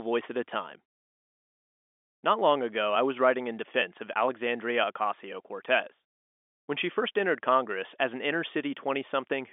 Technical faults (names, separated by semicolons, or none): none